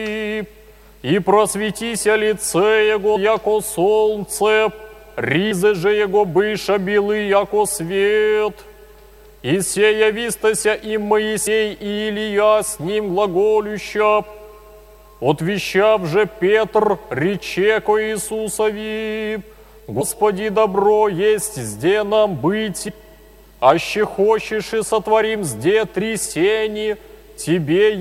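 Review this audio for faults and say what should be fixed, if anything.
Compressed frames skipped at 3.15, 5.50, 11.46, 20.00 and 22.87 s. At each point the audio jumps ahead by a fraction of a second, which fits a handful of 26.1 ms frames lost or rejected by the decoder. Overlapping neighbour frames leave a short smeared blip, not the hard click or silent gap of a dropout. Fix it by re-encoding or re-transferring from a verified source file and checking its integrity before playback.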